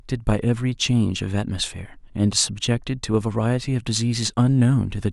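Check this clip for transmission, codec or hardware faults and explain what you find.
No faults can be heard anywhere in the recording. There is nothing in it to locate or explain.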